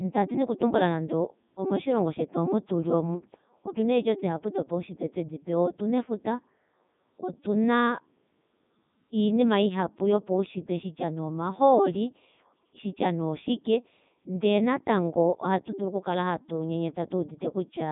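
Speech passed through a Codec 2 vocoder for its whole length, sounding robotic and buzzy, with nothing above about 3.8 kHz; the highest-rate mode, around 3.2 kbit/s, fits. Unlike a plain telephone band-limit, the waveform itself is rebuilt from sine waves.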